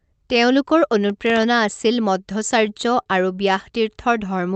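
Speech, with a burst of processor overload crackle from 1.10 to 1.43 s. The processor failed to fill around ten of its very small buffers (under a millisecond each) in time, so the signal drops to silence again and again with hard edges. On a waveform these show as tiny flat gaps, and on a spectrogram as thin vertical broadband streaks. At 3.03 to 3.09 s a short stall from a late packet holds the sound for 29 ms while the jitter buffer waits. Nothing is lost, but the sound is stretched with a faint buzz or dip, visible as smeared, frozen harmonics and a repeated waveform cycle.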